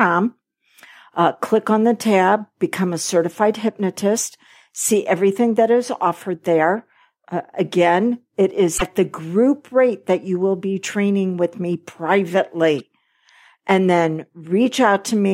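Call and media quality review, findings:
Damaged data in compressed stream at 8.74–8.82 s (after "again it", before "the group rate that") and 12.79 s. Decoder misreads corrupted frames and loses sync, producing a brief disturbance in the speech.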